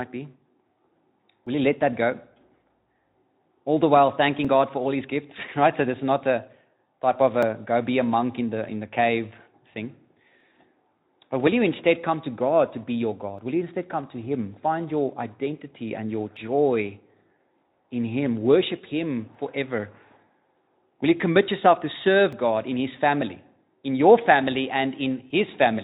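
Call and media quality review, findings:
Audio missing between chunks, likely a capture or processing stage handing off fixed buffers of about 3 s and dropping samples at each boundary. Short skips, each around 20 ms lost, sides butted together with no silence, at 1.47, 4.45, 7.43, 13.39, 16.37, 19.35, 22.33 and 25.31 s. Regular roughly 3 s spacing gives a periodic hiccup in the speech. The Speex path on top is audible as a band ending near 3.8 kHz.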